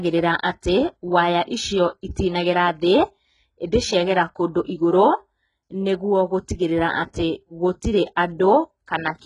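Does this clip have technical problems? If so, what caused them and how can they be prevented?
Yes. Throughout the speech the treble sounds synthetic, with s sounds gritty and lispy and nothing above 11 kHz. That points to likely HE-AAC compression at heavy damage, fitting a bitrate near 12 kbps. Band replication rebuilds the top end from copied lower bands, so harmonics misalign. Encoding at a higher bitrate, or with plain AAC, prevents it.

At 7.13 s a sharp attack is preceded by a brief hiss spread over about 13 ms. This is pre-echo. Quantisation noise sized for the loud attack fills the quiet moment before it within one block. Using shorter transform blocks on transients, or a higher bitrate, prevents it.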